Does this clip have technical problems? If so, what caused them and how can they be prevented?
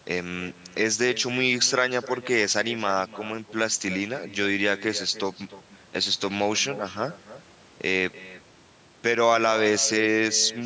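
Yes. The speech carries an echo with no canceller from start to finish. Every phrase is followed, about a third of a second later, by a fainter copy, roughly 16 dB below the direct speech. That copy sounds thinner. The far end is playing the call through a loudspeaker, and its microphone picks it up again. Nothing removes that return path, so the talker's own sound comes back after the network round trip. The call's microphone processing, with nothing above 8 kHz, is working as intended. To prevent the echo, the far end should enable acoustic echo cancellation or use a headset instead of a loudspeaker.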